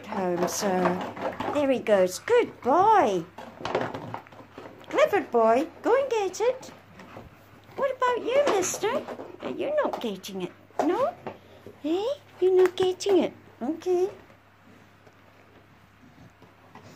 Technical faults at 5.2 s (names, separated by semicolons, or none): drift correction step